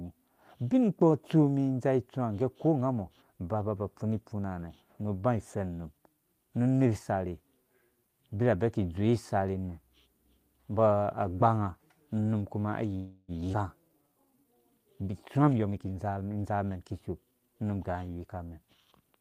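At 12.95 s the speech stops and is held for about 328 ms, to 13.31 s, as a buzzy continuation of the last sound that fades without going fully silent. This is likely a call audio freeze, with delayed packets starving the jitter buffer. On a spectrogram the last frame's harmonics smear horizontally and decay. Afterward the speech resumes where it left off, with nothing lost.

From 13.52 to 13.56 s a skip ahead drops roughly a tenth of a second of speech, probably as the buffer shed its excess delay. The two sides are joined almost directly. The waveform shows an abrupt splice, and the spectrogram shows formant tracks breaking discontinuously.

Between 13.84 and 14.55 s a jitter buffer slow-down stretches the speech to 85% speed by repeating pitch periods, adding 117 ms. Pitch stays the same while sounds drag. On the spectrogram the harmonic bands lengthen without shifting frequency, and the waveform shows repeated identical cycles.

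From 15.38 to 16.71 s a jitter buffer speed-up runs the speech at 124% speed, removing roughly 0.3 s in small pitch-period cuts. Pitch is unchanged, but the delivery sounds hurried. Syllables appear compressed in time on the spectrogram, and the waveform shows tightened cycle sequences.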